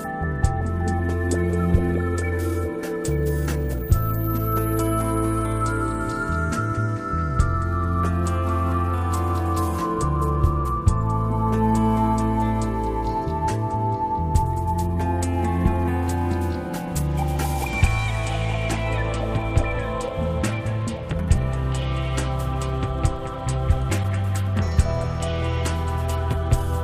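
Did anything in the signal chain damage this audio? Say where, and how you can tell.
Yes: a corrupt frame decoded at 24.03 s in the codec stage. A single damaged frame was played anyway, giving a brief blip of misplaced energy peaking around -20 dBFS.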